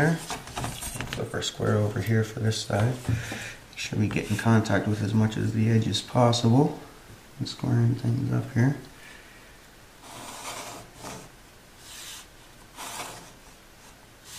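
No technical faults are audible.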